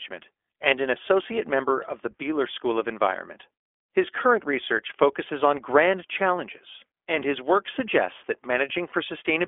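Throughout, the iLBC codec squeezes the sound into a 300 Hz to 3.4 kHz telephone band, fitting its 15.2 kbps mode, with plainly audible rough, synthetic coding damage. From 8.90 to 8.94 s, lost iLBC frames leave a 20 ms gap, consistent with one lost frame, filled by a repeated pitch cycle that sounds briefly buzzy before clearing.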